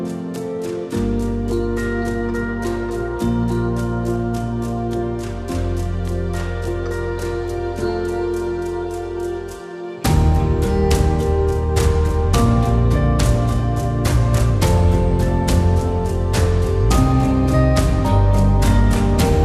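No technical faults are audible anywhere in this recording.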